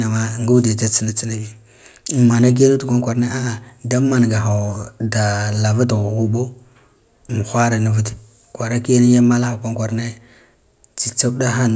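Speech recording with no audible technical faults anywhere in the signal.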